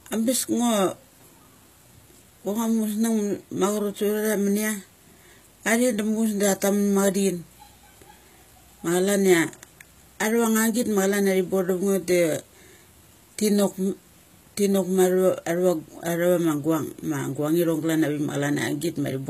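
Speech clip with plainly audible HE-AAC compression throughout, likely from low-rate encoding at around 20 kbps. Treble is rebuilt from copied lower bands rather than coded, so s sounds come out gritty and metallic, and nothing is present above 14.9 kHz.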